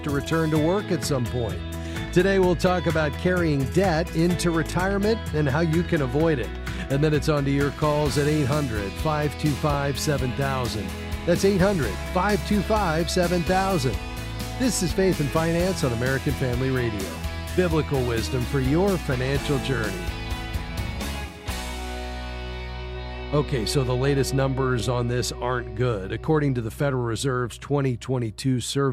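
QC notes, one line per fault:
4.72–4.74, 9.74–9.76, 14.76–14.78, 19.78–19.80, 24.80–24.82 s: overlapping chunks. Each 5.0 s chunk starts 20 ms early, replaying that slice at the join and producing a regular click-like stutter.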